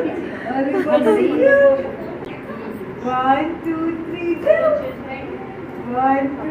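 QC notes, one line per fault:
2.25–2.30 s, corrupt frame decoded: a couple of damaged compressed frames were played anyway, misplacing energy across frequencies as a brief glitch peaking around −20 dBFS.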